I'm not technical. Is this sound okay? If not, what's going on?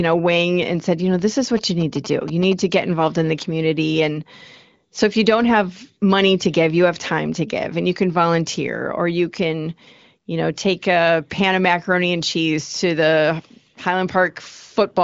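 No. From 1.57 to 2.53 s, between "you know this is" and "to get involved in", a galloping ticking buzz sits quietly under the speech. These are GSM signalling bursts: a nearby 2G phone's short radio pulses, picked up by the audio circuitry.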